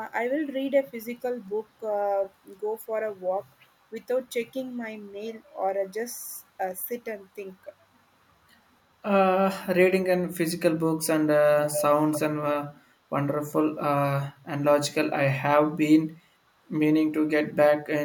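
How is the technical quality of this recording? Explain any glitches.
The recording has two brief echo glitches in the speech. An echo leak, likely from a far-end echo canceller failing to suppress loudspeaker pickup, returns a copy 289 ms late at 11.67–11.83 s, only slightly quieter than the speech, then again at 12.12–12.2 s, around 10 dB down.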